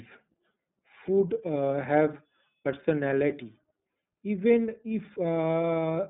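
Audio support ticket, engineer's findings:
iLBC codec artefacts throughout. Speech rough, slightly synthetic, plainly audible. Band limited to roughly 150 Hz to 3.7 kHz, nothing above. Each 30 ms frame coded independently, which fits the 13.33 kbps mode. Narrowband VoIP leg in the path.

Jump in the speech at 1.85 s and 2.85 s. No gap, sound skips forward. About 20 ms missing at the first, about 10 ms at the second. Likely dropped buffer (overrun): samples overwritten before being read, edges joined directly.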